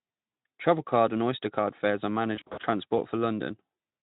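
At 2.35 s, right after "card fares are", VoIP packet loss concealed by the speech codec breaks up the sound until about 2.66 s. About 160 ms is missing in short gaps scattered over 280 ms, which points to eight lost 20 ms frames, and no gap lasts more than 40 ms. Each time, the Speex decoder extends the last pitch and filter at falling gain, so the audio turns briefly into a smeared buzz or coloured noise, then weak or distorted as it recovers. On a spectrogram, the harmonics flatten into steady horizontal bands that fade. The waveform shows repeated, shrinking pitch cycles in place of normal variation.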